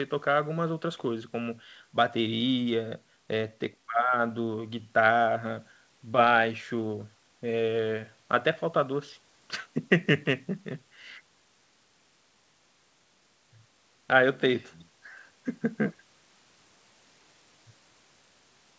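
Nothing goes wrong in this speech recording: it simply carries the sound of a wideband call, with the lowest bass trimmed by the microphone processing and nothing above 8 kHz, which points to a G.722 link.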